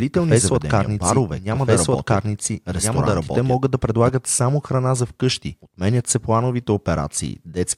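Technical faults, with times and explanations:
0.0–4.1 s, doubled audio track: under way from the start, a full-band copy trails about one and a half seconds behind at roughly equal level, likely from a slower second capture path, and stops abruptly before "само храна за"; the spectrogram repeats each pattern, undecayed.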